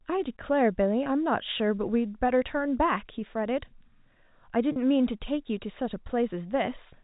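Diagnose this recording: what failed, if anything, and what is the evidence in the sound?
Network packet loss with pitch repetition. At 1.04 to 1.06 s and 4.72 to 4.76 s, a repeated pitch period briefly bridges 20 and 40 ms gaps.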